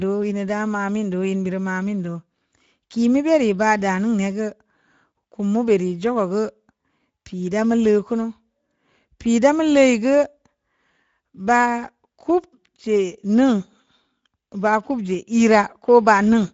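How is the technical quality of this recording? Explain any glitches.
The technical quality is limited by audible Speex codec damage that runs through the whole speech recording. Speex is a CELP coder: it models the vocal tract with a filter and spends its remaining bits on the excitation signal, and at this setting that excitation is coarsely coded. The result is a noisy, hoarse texture on the voice. The band stops at about 7.7 kHz, and the degree of damage fits a bitrate near 17 kbps.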